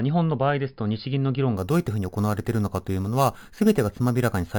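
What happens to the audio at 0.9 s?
Nothing goes wrong at 0.9 s; the speech runs through that moment intact, with no dropout, click or distortion.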